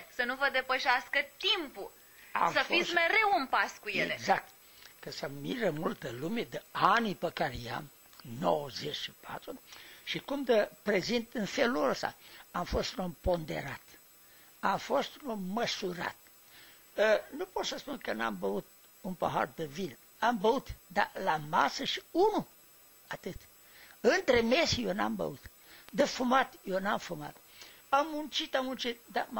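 A block of digital silence occurs at 21.87 s, lasting 4.35 ms, and again at 26.00 s, lasting 1.45 ms, which fits a 64-sample block. The sound cut out with no fade, heard as a brief tick.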